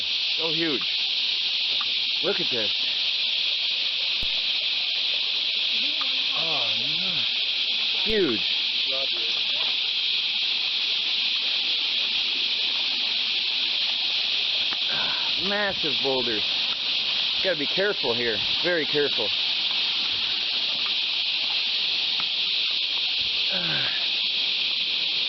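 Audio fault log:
4.23 s and 8.10 s: DC step. The waveform's zero line jumps abruptly to a new offset at each moment, producing a low thump, then drains away as a roughly 5 Hz high-pass would bleed it off. The sound itself carries on unchanged.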